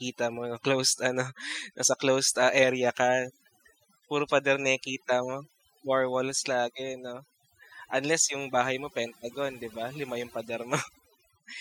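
Overdone noise removal runs through the whole speech clip: an aggressive noise reducer drives individual frequency bands down or off wherever they sit near its noise estimate, so the background drops and breaks up into twinkling specks.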